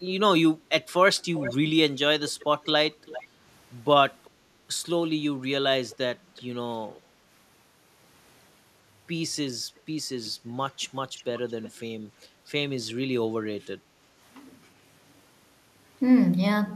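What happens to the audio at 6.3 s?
Right there you're at the tail of an echo leak running from 5.9 to 6.42 s: a faint copy of the voice, roughly 30 dB down, trailing 378 ms behind. It's likely a far-end loudspeaker whose echo canceller let some of its own playback slip back into the call.

Overlapping that, from 6.18 to 6.3 s, there's background gated by the echo canceller. It clamped the mic while the speaker played, so the room tone dips by about 6 dB for roughly a tenth of a second, then comes back.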